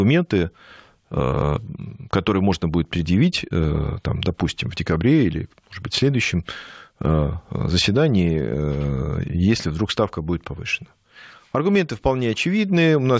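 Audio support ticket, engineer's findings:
No faults found: the speech signal is intact and continuous, with content stopping at 8 kHz as expected for a wideband call path, which fits a codec such as G.722 at 64 kbps.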